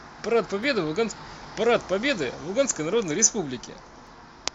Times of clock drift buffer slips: 0.64-4.07

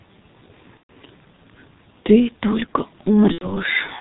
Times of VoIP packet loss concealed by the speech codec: 0.77-0.92, 3.32-3.57

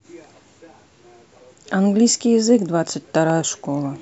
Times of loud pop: 3.30-3.32

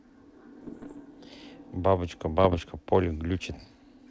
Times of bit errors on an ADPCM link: 0.60-1.01, 2.39-2.60

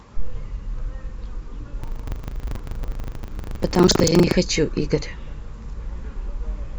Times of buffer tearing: 1.80-4.35

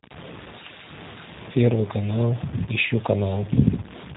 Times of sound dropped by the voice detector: none

